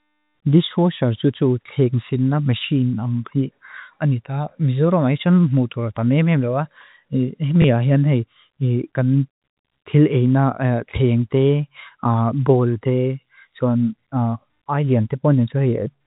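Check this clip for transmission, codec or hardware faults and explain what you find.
One transmission fault is audible. At 7.62 s, just before "a hian", packet loss with last packet repeated occurs. About 20 ms of speech is lost, and the preceding packet replays, giving a small blip. The band stops at 4 kHz, which fits G.711 telephone coding working as expected.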